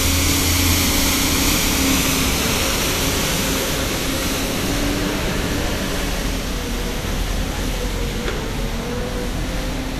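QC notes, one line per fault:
throughout: Vorbis compression, likely. Nothing remains above 14.2 kHz, and the treble below it is plainly hissy and grainy because fine detail has been coarsely quantised into noise of similar energy, which points to a bitrate near 36 kbps. A simple low-pass would sound dull, not rough.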